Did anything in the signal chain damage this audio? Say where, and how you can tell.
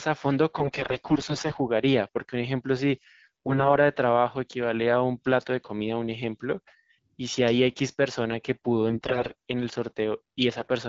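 Yes. The damage is AMR bit errors on the network link, in four bursts: 0.58 to 1.58 s, 3.23 to 3.77 s, 8.90 to 9.35 s, and 10.57 to 10.68 s. In each burst the speech keeps its pitch and loudness but turns hoarse, scratchy and gargly, worst in the 8.90 s burst. That sound points to roughly one bit in ten arriving flipped, nearer one in five there. The corrupted less-protected bits misplace the excitation pulses and skew fine pitch, gain and spectral values, while the AMR-WB stream around the bursts sounds clean at 12.65 kbit/s.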